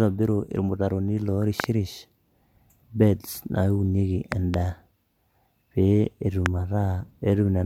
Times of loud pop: 1.60-1.66, 4.32-4.56, 6.46-6.48

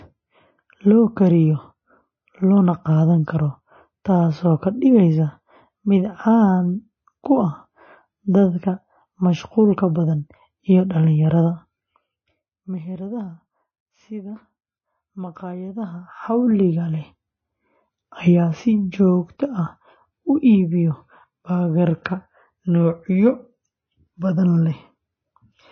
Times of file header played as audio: none

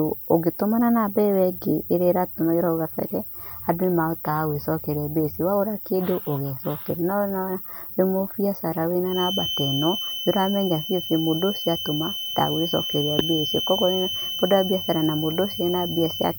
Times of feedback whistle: 9.04-16.38

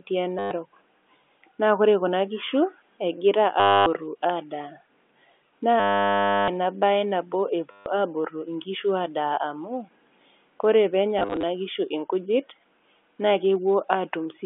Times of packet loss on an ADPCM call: none

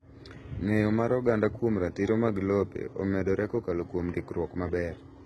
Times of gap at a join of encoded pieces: none

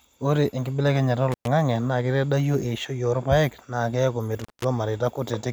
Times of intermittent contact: 1.32-1.47, 4.40-4.64

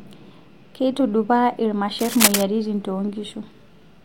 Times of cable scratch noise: 1.98-2.43

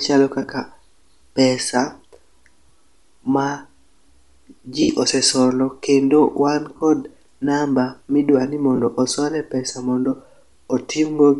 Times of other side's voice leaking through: none

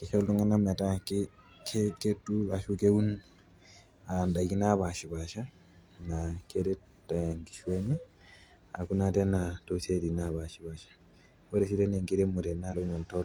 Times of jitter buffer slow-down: none

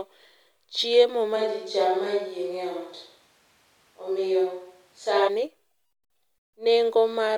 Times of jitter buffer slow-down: none

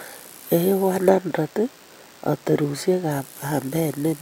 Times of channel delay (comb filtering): 1.09-3.11

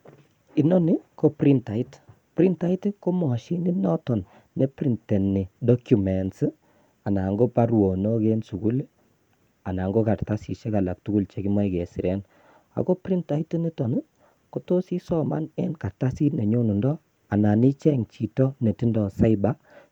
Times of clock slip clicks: 0.12-19.92

